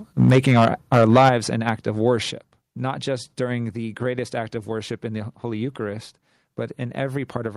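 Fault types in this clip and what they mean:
Microphone overload: from 0.19 to 1.29 s the loudest peaks are flattened about 8 dB past the converter's limit, likely from excessive input gain, adding harsh crackle.
Microphone volume stepped down: sudden level drops of about 2 dB at 0.3 s, 8 dB at 1.29 s and 5 dB at 2.31 s, likely automatic input gain reduction.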